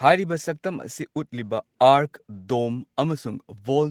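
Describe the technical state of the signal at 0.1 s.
At 0.1 s the speech signal is intact, with no audible fault at that moment.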